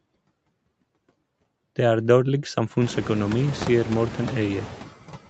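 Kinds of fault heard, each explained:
Noise suppressor artifacts: steady background noise is pulled down by about 16 dB between phrases, leaving a residue that swells under the speech, most audibly once the room noise rises around 3 s.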